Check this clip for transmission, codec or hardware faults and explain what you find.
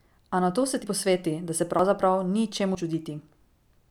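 The speech has one fault, audio missing between chunks, at 0.84 s (after "nato se ti"), 1.79 s and 2.75 s. About 40 ms vanishes at each point and the sides join with no silence, unlike a dropout's gap. The even spacing of roughly one second likely comes from chunked processing.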